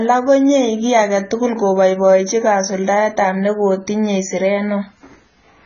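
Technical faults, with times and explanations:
Throughout, low-bitrate audio saved at a high bitrate: likely an earlier heavily compressed encode re-saved generously, which cannot restore lost detail, so the speech stays dull with nothing above 7 kHz.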